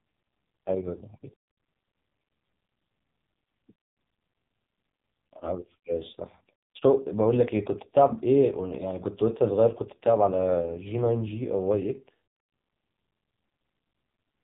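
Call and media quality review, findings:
AMR narrowband mobile codec in the path, whole clip: speech squeezed through the narrowband vocal-tract model at a very low mode, fitting roughly 5 kbps. Nothing passes above 3.8 kHz, so the speech is muffled and telephone-thin. Heavy coding damage: few excitation pulses per subframe, giving a buzzy, synthetic, robotic voice quality throughout. Probable component: mobile network leg or transcoding gateway.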